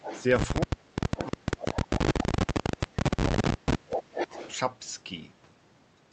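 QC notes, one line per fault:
0.00–0.24 s, echo leak: a faint repeat of the speech trails in about 10 dB below it, delayed 358 ms. This is likely the far side's loudspeaker sound getting past its echo canceller and returning.
0.65–4.37 s, speech suppressed in double talk: the talker's speech dips and breaks up in pieces, about three seconds in all, falling by around 30 dB at worst. This is likely the echo canceller mistaking overlapping talk for echo and muting it.
1.21–1.27 s, 2.21–2.26 s, 3.26–3.32 s, echo leak: brief scraps of delayed speech about 15 dB down, lagging by 365, 371 and 377 ms. The delay creeps upward, which likely points to a drifting echo path the canceller is not tracking.
3.89–4.56 s, echo leak: a longer, stronger delayed copy, only about 5 dB below the speech, lagging 383 ms. This is likely the same leak, now far more exposed as the canceller falls further behind.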